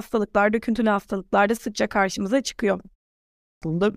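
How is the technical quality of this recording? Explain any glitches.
There's one real glitch, near the end. At 3.39 s, after a pause of about half a second, speech comes back with a clipped start after the pause. Roughly the first 0.23 s is swallowed because the output device dozed off in the quiet and hadn't woken or relocked in time, so the sound pops in abruptly, missing its opening, until about 3.62 s.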